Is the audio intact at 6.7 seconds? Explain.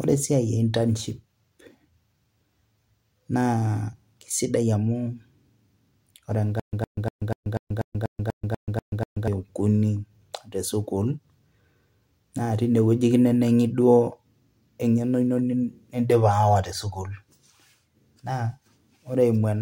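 No. A stutter with silent gaps runs from 6.60 to 9.28 s: a 110 ms fragment repeats eleven times, each followed by 134 ms of digital silence, every 244 ms. This is likely a stalled stream replaying its last fragment, so the intervening audio is lost.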